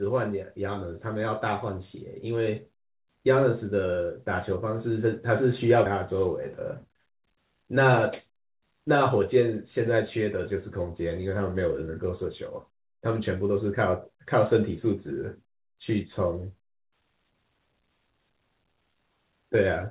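At 5.86 to 5.88 s the speech makes a skip ahead. About seven-tenths of a second of audio is simply gone, discarded once later audio was already queued, and the two sides are butted together with no silence or fill. That seamless join sets it apart from a dropout or packet-loss gap, where you hear a hole or a smeared concealment. Here the sound just lurches forward mid-flow, like a splice.

From 6.64 to 7.24 s comes a jitter buffer speed-up. The receiver's buffer had built up extra delay and trimmed it by cutting out short pitch-period slices over and over, roughly 50 ms in total, so this stretch plays at about 107% speed. Unlike the skip, nothing abrupt goes missing. The speech sounds slightly rushed while its pitch stays unchanged, through the same 4 kHz-limited G.711 call band as the rest.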